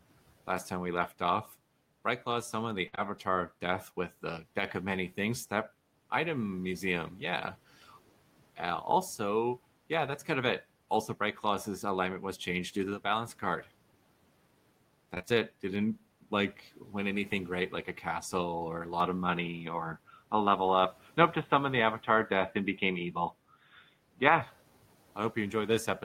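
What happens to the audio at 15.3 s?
Between 15.15 and 15.32 s the speech is hit by repeated packet loss, giving a robotic sound. Several short holes, the longest about 20 ms, arrive in quick succession. Each is patched by extending the preceding sound, so roughly 41% of that stretch is synthetic fill and the rest is clipped away. The result is choppy, with pieces missing. On a spectrogram, harmonics smear into flat repeated slices with hard vertical edges; the waveform shows abrupt, cloned segments.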